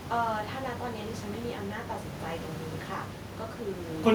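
The speech in this clip shows no technical faults, with the room's own background noise sitting about 8 dB below the speech as part of the recording.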